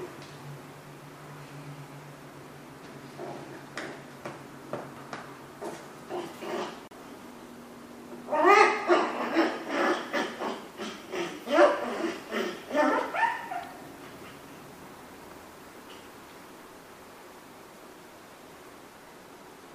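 At 6.88 to 6.92 s the sound cuts out briefly. About 36 ms of silence follows, then playback resumes. This is a Bluetooth stall. Interference likely delayed packets, so the headphones' buffer emptied and playback paused until resent audio arrived.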